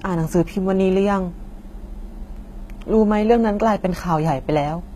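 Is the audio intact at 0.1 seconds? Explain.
No. HE-AAC compression runs throughout, likely from a low bitrate around 20 kbps: replicated treble above the core band makes speech sibilance gritty and metallic, and nothing sounds above 14.9 kHz.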